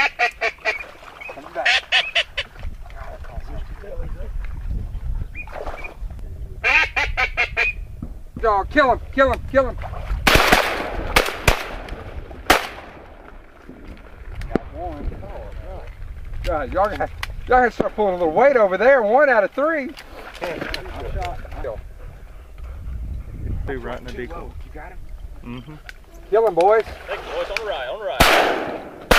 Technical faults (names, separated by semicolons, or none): bit error spike